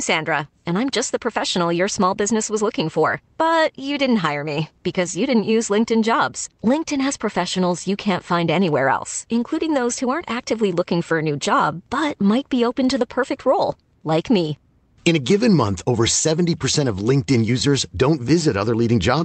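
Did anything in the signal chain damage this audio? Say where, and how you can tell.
No, nothing in the chain has damaged this speech, and the top end rolling off around 8 kHz is just what you'd expect from a normal call path, which fits an Opus link running at about 32 kbps.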